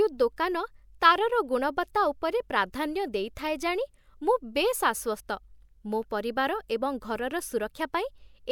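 A speech clip with compressed frames skipped at 5.19 s. A short stretch of audio, about 50 ms, simply goes missing. The sound jumps forward by roughly two frames of about 26 ms each.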